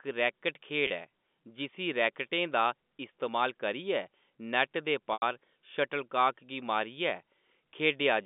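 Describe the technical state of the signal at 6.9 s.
At 6.9 s the speech is intact, carried over an ordinary G.711 telephone line that passes roughly 200 Hz to 3.6 kHz, with no fault at that moment.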